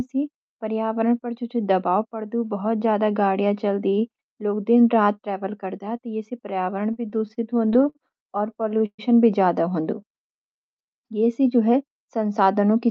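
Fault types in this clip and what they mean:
Repeated stalls (stutter): Packets kept reaching the receiver late, so its jitter buffer ran dry again and again between 6.93 and 9.00 s. At each stall the receiver stretched the last sound to bridge the wait, nineteen times in that stretch. The longest bridge ran 127 ms, and together they filled 371 ms, about 18% of the passage. Nothing is lost, but the speech drags and catches in a halting, stuttering rhythm.
Jitter buffer slow-down: With its reserve running short, the jitter buffer built up extra delay by repeating small pieces of the signal, single pitch cycles or slivers of pause, over and over. This starts after "हों दु" at 10.01 s and lasts until "ये सी" at 11.04 s, adding 73 ms. The speech there plays at 93% speed with no change in pitch, so sounds come out drawn-out.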